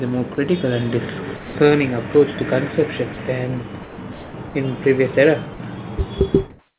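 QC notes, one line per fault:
0.35–0.38 s, 1.37–1.55 s, 3.14–3.17 s, 3.83–3.98 s, 4.13–4.34 s, 4.49–4.55 s and 5.54–5.60 s, sound dropped by the voice detector: speech cuts out for 30 to 210 ms, the longest at 4.13–4.34 s, and steady hiss fills each gap until the talker resumes. The likely cause is the sender's voice detector mistaking soft speech or word endings for background, so comfort noise is played instead. On a spectrogram, harmonic striations give way to flat, evenly spread noise, capped at 4 kHz like the rest of the G.711 band. On the waveform, the speech envelope drops abruptly to a thin, uniform band.
6.50–6.78 s, comfort noise in place of the background: after speech ends, the real room background, about 79 dB below the loudest speech and close to silence, is replaced by a smooth, featureless hiss with a level step of about 13 dB. The likely cause is discontinuous transmission, where the sender stops sending and the receiver synthesises noise shaped roughly like the background. 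A spectrogram shows a sudden change to a static, textureless floor. The waveform shows a flat, constant-amplitude trace.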